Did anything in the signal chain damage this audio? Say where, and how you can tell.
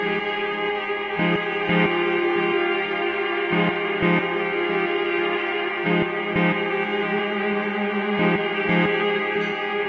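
No, nothing along the chain audibly damages this signal.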